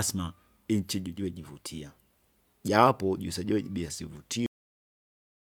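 At 4.46 s, right after "jaapo juise joiji bia", the speech has a cut-off end. The sound stops mid-utterance. There is no natural decay and no trailing breath. The signal falls straight to digital silence and stays there until the clip ends at 5.48 s. That leaves about one second of dead air. The final buffers were never written out or played. So the recording was truncated while the talker was still producing sound.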